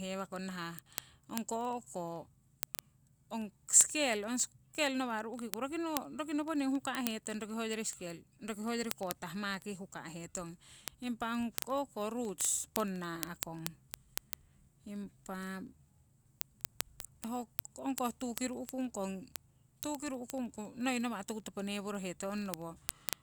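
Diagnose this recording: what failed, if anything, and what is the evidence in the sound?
Word clock ticks run through the whole speech clip, from 0.12 s to 23.21 s, as a steady train of sharp ticks of uneven strength about every 40 ms, several hundred in all. The failure is at the digital interface into the converter: the receiving device runs on its own clock instead of locking to the sender's word clock. A mismatch of roughly 500 parts per million makes the two clocks slip against each other regularly, and each slip drops or repeats one sample, producing a tick.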